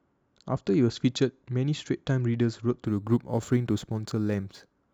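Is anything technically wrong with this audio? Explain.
Yes. From 2.85 s to the end, a gritty, inharmonic fizz shadows the speech. This is crude rate conversion: samples were dropped without filtering, which fits a 48 kHz to 44.1 kHz change.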